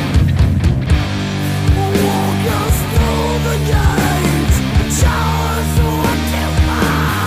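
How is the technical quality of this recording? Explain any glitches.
The recording has one recurring fault: a regular click.

From 0.86 s to 6.90 s, a short click or pop repeats every 0.86 s, about seven times. These are likely clock drift buffer slips. Two devices' clocks disagree by roughly 0.1 percent, so the buffer between them periodically drops or repeats a few dozen samples, breaking the waveform at each slip.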